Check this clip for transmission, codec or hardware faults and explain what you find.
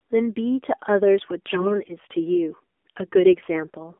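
Yes, there are two faults here, both from a mobile call path.

For the whole clip you get the AMR narrowband mobile codec. The speech sounds squeezed into roughly 250 Hz to 3.4 kHz. At a low rate like 7.4 kbps, the pulse-driven vocal-tract model leaves the voice plainly buzzy and synthetic.

From 1.48 to 1.81 s there are AMR bit errors. Flipped bits in the less protected parts of the frames put the excitation pulses in the wrong places and nudge pitch, gain and spectrum values. Level and pitch hold roughly steady, but the voice turns hoarse, scratchy and gargly. That stretch fits about a dozen damaged frames at an error rate of a few percent.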